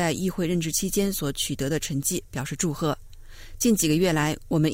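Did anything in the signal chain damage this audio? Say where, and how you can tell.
No, nothing audible points to damage at any stage of the chain.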